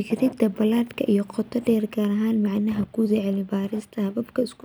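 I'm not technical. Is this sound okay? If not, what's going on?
Yes, nothing wrong turns up anywhere in this speech recording.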